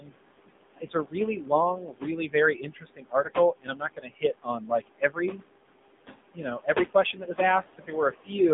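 From start to finish the speech carries AMR narrowband mobile codec damage: the band stops near 200 Hz and 3.6 kHz, and voiced sounds turn buzzy and synthetic, which fits a low AMR-NB mode around 7.4 kbps. Unlike a plain low-pass filter, the codec also reshapes the voice itself into a modelled, pulse-driven tone.

Noise suppressor artifacts also run throughout. The room noise, sitting about 11 dB under the speech, is pulled down by about 21 dB in the gaps and swells back beneath each phrase. The codec warble swirls, but this noise pumps in step with speaking.

Speech cut by the noise suppressor follows from the same processing, when the suppressor mistakes parts of the voice for noise. From 0.0 to 0.17 s, a brief onset dips by up to about 18 dB. Between 0.77 and 5.43 s, roughly two seconds in total are turned down with the background, dropping by up to about 21 dB. Shorter losses fall at 6.11 to 7.3 s, up to about 16 dB, and at 7.78 to 8.3 s, up to about 17 dB. 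These parts sound swallowed rather than muffled across the whole band.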